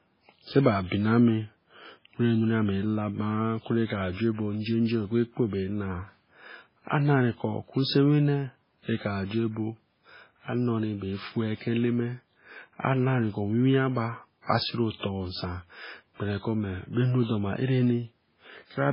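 From start to end the speech carries heavy damage that is likely MP3 compression, at a rate that points to something as low as 16 kbps. Everything above 5.3 kHz is gone, a flat ceiling on a spectrogram, while weak bands flicker on and off below it, making s sounds swirly and watery.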